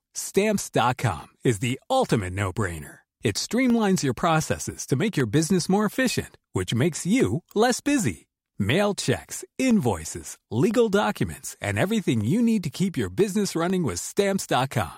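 From 0.2 s to 14.7 s the speech carries periodic USB or driver dropouts, one every 0.5 s, about thirty in all. Each time, something on the bus or in the driver stalls the audio stream briefly, and roughly half a millisecond of signal is replaced by silence. These tiny gaps cut the waveform abruptly, so they are heard as evenly spaced ticks riding on the voice, present only where there is sound to interrupt.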